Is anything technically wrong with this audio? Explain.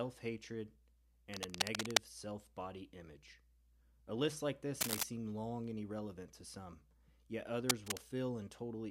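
Yes. Cable scratch noise occurs at 1.34 to 1.98 s, 4.81 to 5.04 s and 7.69 to 7.97 s. A worn cable or connector was likely moved, its contact resistance fluctuating rapidly, laying dense, uneven scratching bursts over the speech, somewhat louder than the speech itself.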